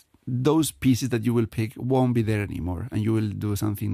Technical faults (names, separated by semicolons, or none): none